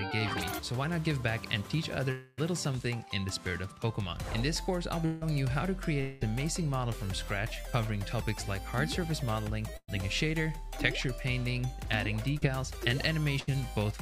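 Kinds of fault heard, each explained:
Long network dropout: a buzz or hiss that fades at 2.11, 5.06 and 6.01 s, about a quarter-second or less, likely audio that never arrived.
Burst of packet loss: brief held buzz or fading hiss at 9.77 and 13.40 s, about 120 and 80 ms of audio lost, playback resuming further on.
Short concealed packet loss: a brief smear at 12.38 s where about 40 ms failed to arrive and was patched by continuing the previous sound.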